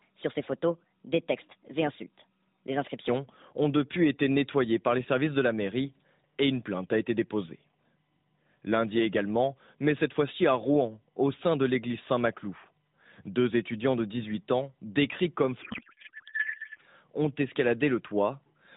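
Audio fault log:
15.62–16.82 s: codec payload misread. For about 1.2 s, inside an AMR narrowband stream at 12.2 kbps with light codec damage and nothing above 4 kHz, the speech gives way to garbled noise and warble that barely tracks it. The decoder is reading frames whose fields sit in the wrong positions, which fits octet-aligned AMR being unpacked as bandwidth-efficient. Each misplaced bit drives the synthesis model with nonsense parameters until the packing matches again.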